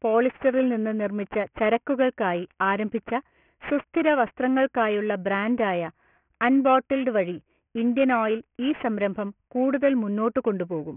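From start to finish the sibilants sound gritty and metallic, with harsh, wrongly pitched tones packed up against 3 kHz at roughly 20 dB below the speech. This is aliasing. The audio was downsampled without filtering, which fits a 6 kHz rate, so everything above 3 kHz folded back down.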